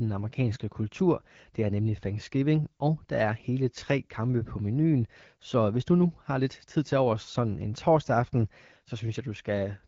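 No technical faults can be heard in this speech, which comes through the AMR wideband (HD Voice) codec at 12.65 kbit/s as expected for that rate.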